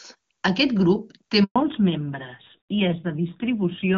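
At 1.44 s, just after "grup té", the speech cuts out for 120 ms. This is a handover gap. The call was passed from one network link to another, and no speech frames came through during the switch. The sound fades within a few tens of milliseconds. Then there is dead silence until 1.56 s. Nothing spoken in that window survives.

From 1.56 s to the end, a fallback to narrowband follows. Before the gap, the HD Voice codec carries the speech with clear, faint-artefact wideband quality, consistent with its top rate. After the new link starts, the call runs on an older narrowband codec instead. Nothing above 4 kHz remains. Sibilants lose their crispness. The speech turns duller, boxier and rougher, which fits a low narrowband rate around 7.4 kbit/s.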